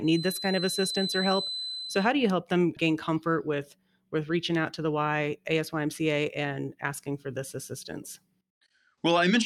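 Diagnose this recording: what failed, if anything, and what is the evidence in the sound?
Feedback whistle, from the start to 2.15 s: a thin, steady 4 kHz tone sits about 10 dB under the speech and swells and fades slowly in level, ending just before "you help them gain". The likely cause is a loudspeaker-to-microphone loop held right at the edge of feedback.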